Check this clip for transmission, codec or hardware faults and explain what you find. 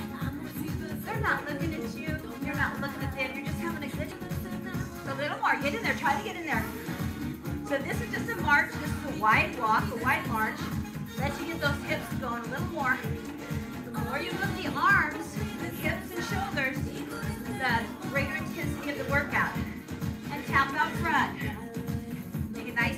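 Two transmission faults turn up, both right around the 4-second mark.

At 4.11 s there's a skip ahead. Roughly a second of audio just isn't there, and playback lands straight on later material with no gap or fill in between. That happens when a chunk gets lost in transit or dumped by the jitter buffer while newer audio is already queued. The two sides of the cut butt together, so it sounds like an abrupt splice.

Right after, from 4.21 to 6.00 s, there's a jitter buffer speed-up. The buffer was holding more than its target, so the receiver trimmed out lots of tiny pitch-period-sized slivers in a row, roughly 150 ms in total, to pull the delay back down. The pitch stays put but the audio runs at about 107% speed, so that stretch comes across as slightly rushed.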